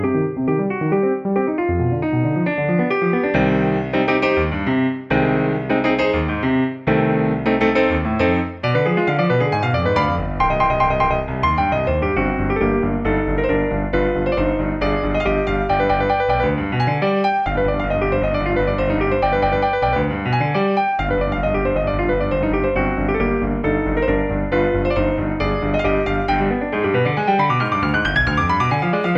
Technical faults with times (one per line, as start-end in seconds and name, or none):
none